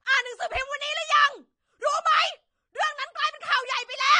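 Throughout the speech, nothing sounds above about 9.7 kHz, and what remains is dull and smeared, with a warbling, fizzy texture on sibilants and held sounds. This is likely AAC compression, AAC-LC at a low rate, which fits a bitrate around 32 kbps. The encoder lowers its cut-off and quantises each frame coarsely, leaving gaps or substitute noise in bands. A plain low-pass filter would dull the top without this shifting, watery grain.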